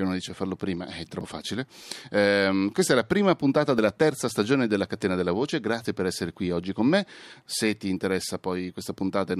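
At 1.21 s, right after "dice farlo prima è", the speech jumps, and something like 70 ms just isn't there. The same thing happens at 5.85 s, just before "per essere qui oggi", with about 50 ms missing. Both are a dropped buffer (overrun), likely because the capture side didn't collect its samples before the hardware overwrote them, so the surviving audio gets butted together with no gap in between.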